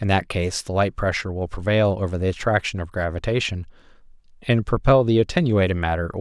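No technical faults are audible.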